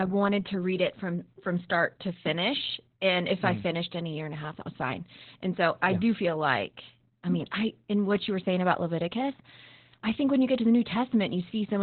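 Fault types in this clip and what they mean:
Opus voice compression: The speech sounds muffled, hoarse and faintly robotic, with nothing above 4.3 kHz. Opus is running its SILK speech coder in narrowband mode and coding the excitation very coarsely. That fits a bitrate near 8 kbps, and the damage is heavy throughout.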